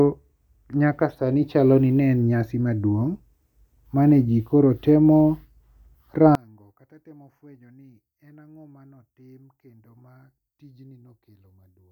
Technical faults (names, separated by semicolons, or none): one channel inverted